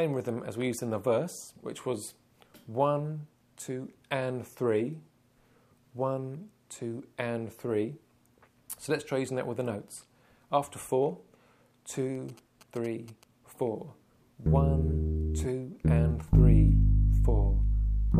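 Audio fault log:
12.15–13.24 s, GSM signalling bursts: A galloping dit-dit-dit of short buzzes cuts in for about a second. The buzz repeats at about 217 Hz, the frame rate of a 2G phone's transmitter. A nearby handset is sending brief signalling bursts, not a continuous call. The audio circuit rectifies that radio energy and turns the envelope into sound. It sits roughly 25 dB under the main signal, so it reads as a faint chatter.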